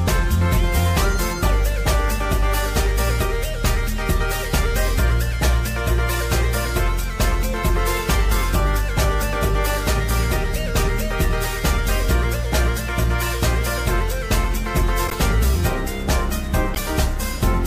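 At 15.07 to 15.15 s and again at 16.74 to 16.77 s, a corrupt frame decoded: damaged bits pushed energy into the wrong frequencies, producing short chirpy noise bursts peaking near -10 dBFS. The first suggests a few consecutive frames, the second a single frame. A spectrogram shows scattered, misplaced streaks.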